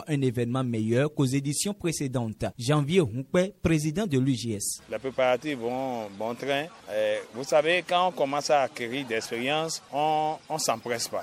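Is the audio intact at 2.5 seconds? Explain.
Yes, at 2.5 seconds the audio is intact, with no dropout, click, distortion or other disturbance at that point.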